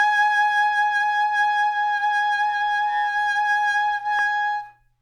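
A block of digital silence hits the music at 4.19 s: for about 1.33 ms the signal drops straight to zero and returns with no fade, which fits a 64-sample block left unfilled. Both hard edges merge into one sharp tick.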